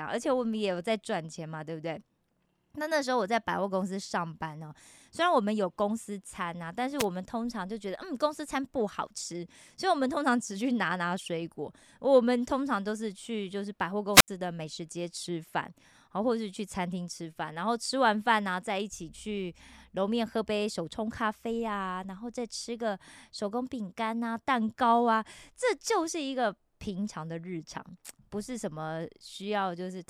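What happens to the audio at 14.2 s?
A wireless microphone squelch dropout runs from 14.13 to 14.28 s. The analogue FM radio link between the transmitter and the receiver weakens for a moment, and once the signal falls below the receiver's squelch threshold the output is muted to stop raw static reaching the speech. You hear a short swell of hiss, then a hole of near silence lasting 74 ms, and then the voice returns as the link recovers.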